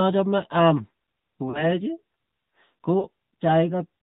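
AMR narrowband mobile codec runs throughout the clip. All content above 4 kHz is gone, and the speech has a plainly audible buzzy, synthetic edge from the pulse-driven vocal tract model. The amount of damage fits a mid-rate mode around 10.2 kbps.

Lost AMR speech frames occur from 1.50 to 1.64 s and again from 3.00 to 3.06 s. The first gap covers about 40 ms, consistent with two dropped 20 ms frames. The second covers about 20 ms, consistent with one. Each time, the decoder repeated the last good pitch and vocal tract settings at falling gain, so the sound smears into a brief warbly dip before the speech resumes slightly rough.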